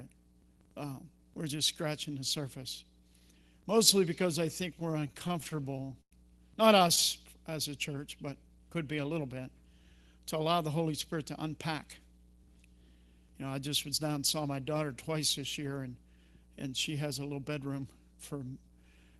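From 4.79 s to 6.13 s the audio shows repeated stalls (stutter). The jitter buffer ran dry 17 times in this span as packets arrived late or too slowly. Each time, the receiver extended the last sound and faded it in the longer waits, the longest at 104 ms. Concealment fills about 278 ms, roughly 21% of the span, and nothing is lost. The result is a dragging, hiccupping delivery rather than dropouts.

Between 17.32 s and 17.81 s a jitter buffer speed-up occurs. The buffer had built up more audio than its target, so the receiver trimmed short pitch-period segments in quick succession, around 50 ms in total. Playback runs at 110% speed over this half second with the pitch unchanged, so the sound briefly feels rushed and its timing tightens before settling back to normal pace.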